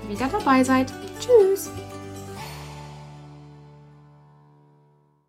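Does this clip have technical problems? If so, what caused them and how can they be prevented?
No, nothing technical jumps out here, so there's no fault to trace back or guard against next time.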